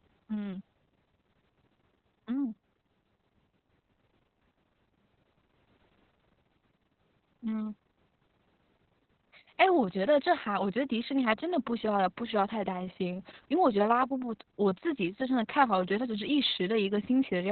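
Throughout, Opus voice compression in narrowband SILK mode removes everything above 4.4 kHz. Unlike a plain low-pass, coarse excitation coding, consistent with about 6 kbps, makes the speech hoarse and robotic.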